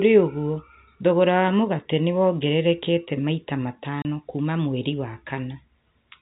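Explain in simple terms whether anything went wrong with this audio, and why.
One thing went wrong. At 4.02 s the speech drops out completely. The gap lasts about 30 ms and ends at 4.05 s. This fault is called packet loss filled with silence. The sound travels in small chunks, called packets. One chunk went missing, and the receiver played nothing in its place. A gap this long points to a single lost packet. The sound also has the narrow, telephone-like quality of G.711 telephone coding, which is working as intended.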